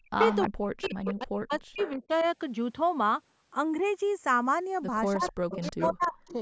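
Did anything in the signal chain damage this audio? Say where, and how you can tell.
Yes. The two channels drift apart throughout, a converter-clock fault between two devices. Their offset creeps to about 0.2 ms by the end, roughly a 30 ppm clock mismatch, so in mono the comb notches sweep slowly like flanging. A fixed cabling or delay offset would leave the notches stationary.

Speech is suppressed in double talk from 0.0 to 2.25 s and from 5.16 to 6.35 s, a call-processing fault. The level dips and breaks up by about 40 dB while the far side also talks. This is likely the echo canceller ducking both talkers. Unlike network dropouts, the gaps follow overlapping talk rather than packet timing.

Echo leaks also come from call processing, at 0.2–0.48, 0.82–1.15, 1.52–2.26 and 5.22–6.33 s. A distinct delayed copy trails the speech by 316 ms at about −5, −10, −20 and −10 dB. It is likely residual loudspeaker echo that the canceller missed. 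Room reverberation would smear continuously instead of repeating at one fixed delay.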